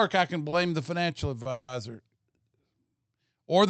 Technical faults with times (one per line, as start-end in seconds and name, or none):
0.49-0.55 short stall from a late packet
1.42-1.48 short stall from a late packet
1.51-1.71 call audio freeze